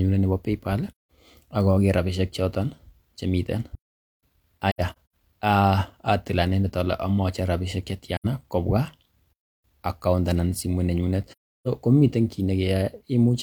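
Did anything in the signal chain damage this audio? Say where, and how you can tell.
Yes, two problems. First, AAC frame loss with muting at the codec stage. There are soft-edged holes in the speech at 0.91 to 1.08 s, at 4.71 to 5.13 s (several short gaps over about 430 ms, the longest roughly a tenth of a second), at 8.16 to 8.26 s right after "rabishek che", and at 11.32 to 11.68 s after "account anan simoit nenyunet". The decoder zeroed the spectrum of the missing frames, and the overlapping windows fade out and back in, so the holes have soft edges.

Second, there's a playback stall, in the player's buffer stage. Output drops to dead silence mid-flow at 3.75 to 4.23 s, roughly 476 ms, and again at 9.33 to 9.64 s, about 310 ms, just before "account anan simoit nenyunet". The edges are abrupt rather than faded, which separates these from the codec holes. The likely cause is the player running dry or its thread getting blocked, with the sound resuming once it recovered.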